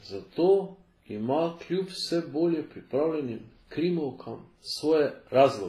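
Transcoding between lossy codecs is the likely cause. The stacked artefacts point to a low-rate WMA encode, then Vorbis, then HE-AAC near 24 kbit/s. Each pass re-encodes earlier damage and adds its own, so the different artefacts are heard together throughout the speech. Nothing remains above 14.8 kHz.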